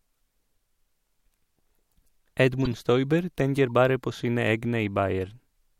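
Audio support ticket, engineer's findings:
Harsh chirp and noise burst in the speech at 2.64–2.73 s, loud; brief faint blip at 3.70 s. Corrupt frame decoded in the codec: flipped bits in a handful of compressed frames, played anyway, with misread gains and codes throwing energy to wrong frequencies for each frame's duration.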